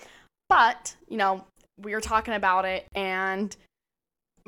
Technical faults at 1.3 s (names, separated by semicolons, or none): none